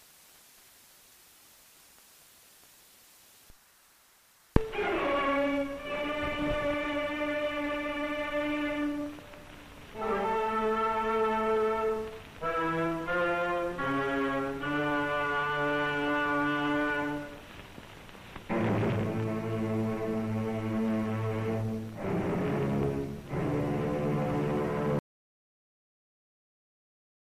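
At 24.99 s the audio just cuts out into dead silence, no room tone, through to the end: an audio dropout to silence, likely a lost input.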